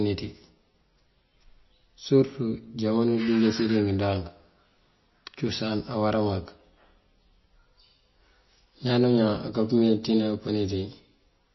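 MP3 compression damage runs through the whole speech recording. Nothing at all is heard above 5.8 kHz, a hard ceiling that leaves the speech dull and strips the crispness from s sounds. Within the remaining band, quiet frequency detail flickers in and out from frame to frame, giving a watery, swirling texture, and consonant onsets sound smeared. Damage this plainly audible points to a starved encoder, likely MP3 at a bitrate around 23 kbps.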